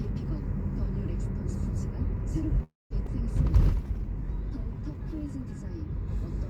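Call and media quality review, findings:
Call audio freeze, 2.63–2.93 s: sound stops and resumes where it left off, with nothing lost and about 270 ms of playback delay added. Likely cause: packets stalled and the jitter buffer ran dry. The receiver bridged the gap with a brief fading continuation, then about 200 ms of silence. On the waveform this is a short decaying tail, then a flat line. On the spectrogram it is a smeared band that fades, then a blank vertical gap.

Skip ahead, 3.06–3.10 s: playback jumps forward and roughly 100 ms of sound is gone. Only about 7 ms of fill joins the two sides, so there is an abrupt splice with no audible pause. Points to the jitter buffer discarding queued audio on overflow. On the waveform the envelope jumps at a near-seamless join. On the spectrogram a thin vertical seam shows where the content changes discontinuously.

Jitter buffer slow-down, 3.62–5.28 s: sound runs at about 93% speed with unchanged pitch, and 118 ms of extra duration is spread across the stretch. 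The jitter buffer rebuilt its reserve by repeating short periodic segments. The result is stretched events. On the waveform there are repeated near-identical cycles. On the spectrogram the harmonics are elongated, with no frequency shift.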